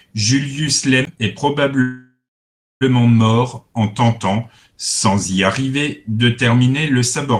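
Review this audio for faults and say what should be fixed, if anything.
At 1.05 s there is a CD skip: a brief mute of roughly 15 ms, after which the speech resumes from a different point. A physical knock or a flaw in the disc threw the laser onto another turn of the spiral, so playback lost its place and carried on from elsewhere on the track. To prevent it, re-rip the source with a secure, error-checking ripper from a clean disc, and do not play it live.

From 1.82 s to 2.83 s the audio stalls for about a second in a call audio freeze. The last sound is stretched into a fading buzz or hiss that drops to silence for about 630 ms, and the speech then resumes at "mort en tentant sans" with nothing lost. This is likely packets being delayed in transit until the receiver's jitter buffer ran dry. The filler covers about 993 ms, and everything after it arrives later by that amount. To prevent it, record the call locally at each end, or use a connection with steadier latency and a deeper jitter buffer.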